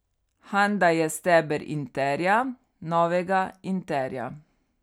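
No technical faults can be heard anywhere in the speech. At no moment does anything in the recording call for a fault to be noted.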